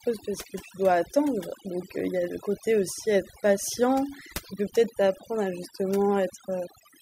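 Overdone noise removal runs through the whole clip: a noise reduction stage set too strong pushes individual frequency bands down or off whenever they sit near its noise estimate. The background drops and breaks up into twinkling specks, and quieter parts of the voice are stripped away with it.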